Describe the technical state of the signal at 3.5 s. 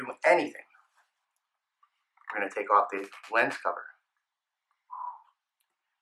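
At 3.5 s the signal is intact, with no audible dropout, distortion, clipping or other technical fault at that point.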